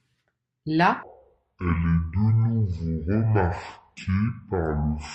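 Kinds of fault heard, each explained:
Section at the wrong speed: from 1.03 s, just before "de la", to the end, the speech plays at 0.517 times its speed, dragging and dropping roughly ten semitones together, likely from a wrong playback clock. A pure pitch shift would leave the timing unchanged.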